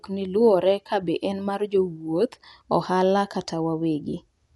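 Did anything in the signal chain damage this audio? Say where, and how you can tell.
Yes. Dolby Digital compression runs through the whole speech clip, and it likely happened at the codec stage. Nothing comes through above 11.4 kHz, so the sound is dull, and a rough, fluttering noise hangs around voiced tones. The narrowed band and plainly audible damage fit a low bitrate near 64 kbps. There the encoder trims the top of the spectrum and leaves many frequency lines without mantissa bits, and the decoder fills those gaps with dither noise.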